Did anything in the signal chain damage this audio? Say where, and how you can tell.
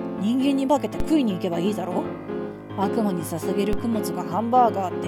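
Yes. Two DC steps appear at 1.00 s and 3.73 s, each heard as a low thump while the sound carries on unaffected. At both points the waveform's zero line jumps by about -14 dBFS, then drifts back with the slow exponential recovery of a roughly 5 Hz high-pass. That points to the converter or analogue input stage: a recalibration or an offset source being switched in, with downstream AC coupling bleeding the offset away.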